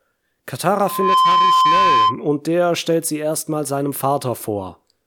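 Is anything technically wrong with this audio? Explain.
Yes. A loudspeaker feedback squeal runs from 0.76 to 2.2 s, ending just before "der stellt sie erstmal". The microphone is hearing its own loudspeaker, and at 1 kHz the loop gain passes one. That tone swells over a fraction of a second into a steady whistle, somewhat louder than the speech.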